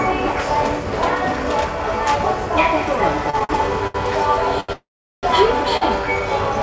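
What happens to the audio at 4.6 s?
A short stall from a late packet runs from 4.60 to 4.71 s. The jitter buffer ran dry, so the last sound was stretched for about 82 ms, nothing lost, just a slightly buzzy hold before the audio resumes a bit late.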